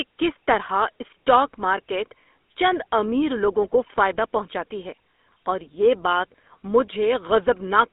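Throughout, GSM full-rate codec damage: pulse-excited vocal-tract coding adds a gravelly buzz inside a 250 Hz to 3.6 kHz band, rougher than plain telephone band-limiting.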